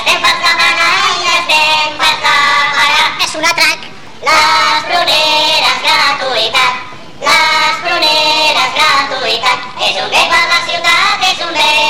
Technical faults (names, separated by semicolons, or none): none